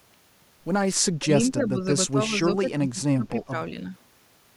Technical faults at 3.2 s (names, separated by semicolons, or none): speech suppressed in double talk